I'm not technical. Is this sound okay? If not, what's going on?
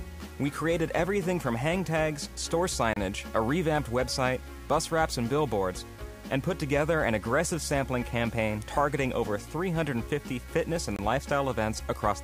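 No. The whole clip has a grainy, gritty edge that follows the sound, likely from low bit depth without dither: roughly seven-bit audio, chopped off rather than smoothed. There are also two brief dropouts, at 2.93 s and 10.96 s, each lasting about 25 to 30 ms. These are gaps between stream segments: the pieces of the stream don't quite meet, so the player fills the hole with silence.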